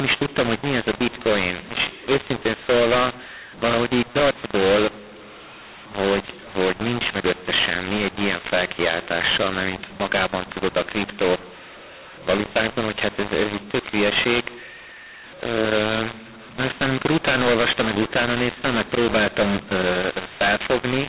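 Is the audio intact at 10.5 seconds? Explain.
No. At 10.5 s, as across the whole clip, mu-law and A-law are mixed up: mu-law telephone samples are decoded as A-law, scrambling levels. The speech sounds harsh and distorted, pauses fill with noise, and the waveform shows jagged, misshapen peaks over a raised floor, with broadband hash below the telephone 4 kHz ceiling.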